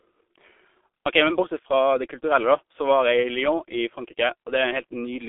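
Speech passed through a G.723.1 codec throughout, consistent with about 6.3 kbit/s. It sounds muffled and hoarse with smeared consonants, and the spectrogram shows nothing above 3.8 kHz.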